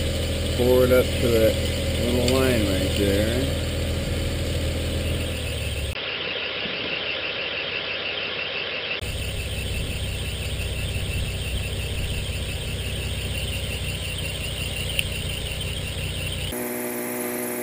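Input likely switched to a poorer device from 5.93 to 9.02 s: after a 20 ms gap, the sound dulls, cut above 5.4 kHz, with faint new noise.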